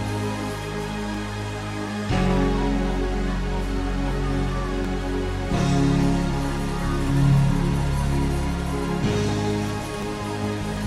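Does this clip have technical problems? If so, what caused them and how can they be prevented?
Yes. From about 0.40 s to 10.77 s there's a regular click roughly every 0.74 s, around fifteen of them, which is the classic signature of clock drift buffer slips. Two devices are likely running on separate clocks that disagree by something like a tenth of a percent, so the buffer between them creeps until a few dozen samples get dropped or repeated, and you hear that jump as a tick. To prevent it, lock both devices to one shared word clock, or put an adaptive resampler on the link.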